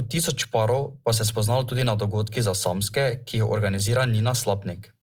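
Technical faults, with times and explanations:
Throughout: Opus compression. The speech has likely passed through an Opus encoder running in its CELT music mode at a low rate, one that fits about 24 kbps. Short of bits, the encoder kept each band's overall energy but rebuilt much of the fine detail by folding lower bands upward or filling them with noise. The damage is plainly audible: the speech sounds grainy and rough, with a noisy texture rather than swirling gaps, while the band still extends to 20.2 kHz.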